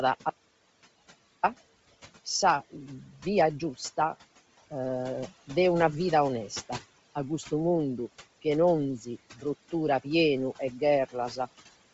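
Speech recorded with room noise about 20 dB below the voice, carrying a breathy, grainy edge throughout, likely from Bluetooth LC3 compression at a low rate fitting 24 kbps; the spectrogram shows nothing above 7.7 kHz and noise-filled upper bands. An audio dropout to silence runs from 0.30 to 1.43 s, about 1.13 s lost, with no room tone left, drawn as a flat zero-line in the waveform and likely caused by a lost input link.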